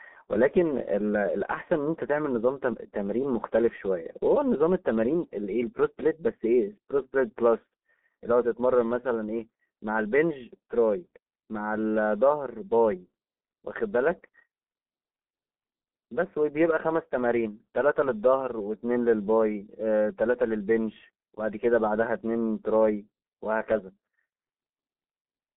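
Throughout, the speech sounds muffled, hoarse and boxed-in, with consonants smeared together and nothing above 3.8 kHz. This is G.723.1 codec damage: its 30 ms frames update the voice model sluggishly, and the heavy compression fits a rate near 6.3 kbit/s, squeezed into a 200 Hz to 3.6 kHz telephone band.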